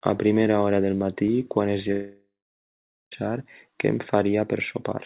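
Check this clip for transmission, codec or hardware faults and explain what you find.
One fault stands out: a long network dropout in this speech clip, running from 1.92 s to 3.13 s, just after "del matí quan es". For about 1.2 s no audio reaches the listener. The most likely cause is a stretch of lost packets. The receiver stretches the last sound into a fading buzz or hiss, and then about 0.84 s of near-silence follows. When the speech resumes, that part is simply gone. On a waveform this shows as a decaying tail and then a flat gap. A spectrogram shows smeared, repetitive harmonics fading into an empty band. The whole clip sits below 4 kHz, as expected from the G.711 mu-law call path.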